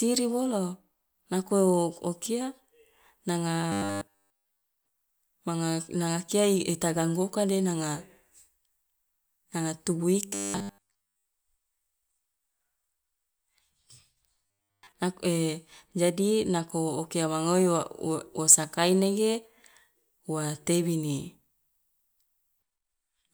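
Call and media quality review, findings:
Robotic sound from repeated short buffers at 3.72–4.63, 10.28–11.26 and 14.46–14.92 s: rigid 100 Hz buzz over the speech. Likely jitter buffer underrun replaying ~10 ms chunks, skipping most real audio.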